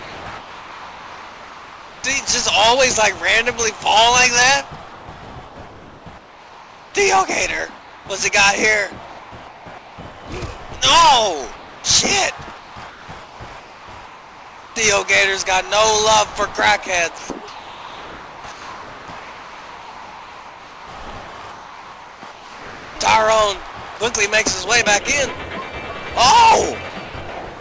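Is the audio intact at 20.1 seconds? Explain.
No. At 20.1 seconds the clip is inside a stretch of comfort noise in place of the background, running from 17.18 to 22.96 s, with about 4.7 s of the real background replaced. The likely cause is discontinuous transmission: the sender goes quiet during the pause, and the receiver fills the gap with generated noise. That noise is steady and featureless, lacking the detail of the true background, and is band-limited to 8 kHz by the G.722 call path.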